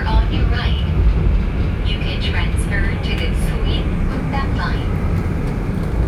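Nothing stood out on listening to these sounds.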